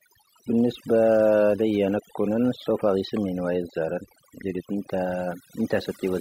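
A speech recording with overdone noise removal throughout: bands near the noise estimate are gated out, leaving a lowered background that breaks up into twinkling specks.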